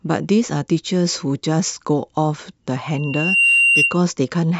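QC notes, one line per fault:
2.93–4.01 s, loudspeaker feedback squeal: the microphone is hearing the loudspeaker it feeds, and around 2.8 kHz the round trip through mic, amplifier and speaker gains more than it loses, so that frequency keeps feeding itself. It swells over roughly half a second into a piercing single-pitched whistle sitting about 5 dB above the speech, then holds until it stops just after 4.0 s.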